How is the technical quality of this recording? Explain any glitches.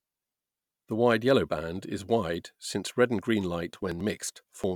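The recording has one glitch near the end. After "since red and green", 3.73 to 4.64 s, periodic USB or driver dropouts occur. A blocked driver skips about 10 ms every 90 ms. This causes regular ticks.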